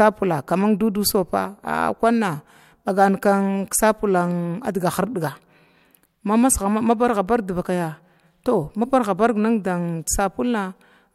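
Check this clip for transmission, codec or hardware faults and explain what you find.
I find no faults to report in this clip.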